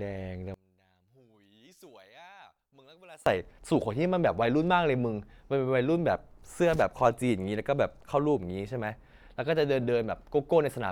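One channel inverted, from 0.54 to 3.26 s: the speech collapses by about 28 dB, leaving a faint residue. The likely cause is one stereo channel flipped in polarity, so the centred voice cancels when both channels are summed to mono.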